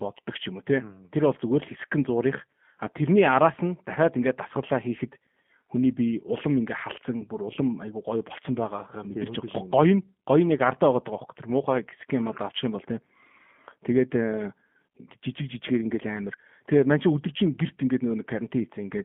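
Throughout, the speech carries G.729 codec damage: band-limited to about 150 Hz–3.4 kHz, with a rough, synthetic pulse-coded texture that fits 8 kbit/s G.729A.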